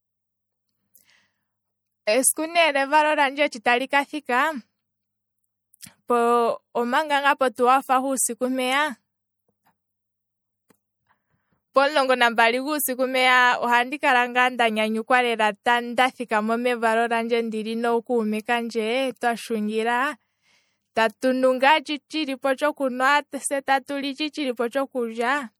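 Across the whole speech clip the sound turns watery and swirly, with chirpy, metallic sibilants. This is most likely MP3 compression at a low bitrate, which fits about 64 kbps. A spectrogram shows isolated bins flickering on and off between frames.

Pre-echo appears at 3.51 s and again at 3.64 s. Quantisation noise smears backwards from a sharp attack for about 12 ms and 14 ms respectively, so a short hiss comes just before each onset and softens it. The waveform shows a low noise skirt before each transient.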